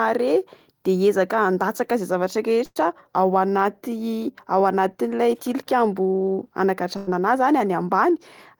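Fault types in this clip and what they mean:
burst of packet loss: At 2.65 and 7.0 s, the last sound is held and fades for about 100 ms. Then 60 ms of speech is skipped.
jitter buffer speed-up: After each gap, short pitch-period pieces are cut to shed built-up delay. Speech runs 8% and then 12% faster at the same pitch.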